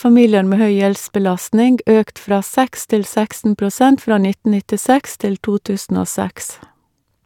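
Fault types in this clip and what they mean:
No technical faults can be heard anywhere in the speech. There is nothing to list for any kind of fault.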